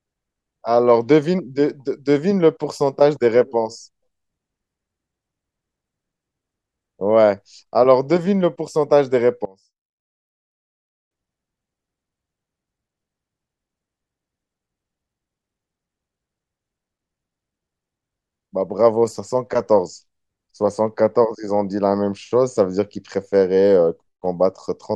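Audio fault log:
9.45 to 11.11 s, one channel inverted: the speech suddenly drops by about 25 dB to a faint copy, then returns. Likely one side flipped polarity, so the centred voice and low end cancel in mono, leaving only the faint left-right difference.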